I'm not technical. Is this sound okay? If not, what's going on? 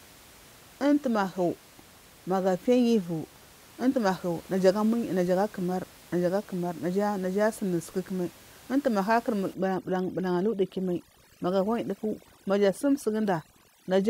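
No. Overdone noise removal starts at 9.54 s and runs to the end. A noise-cleaning tool pushed too hard mutes frequencies it mistakes for the faint room noise, so the background drops and breaks up into twinkling specks.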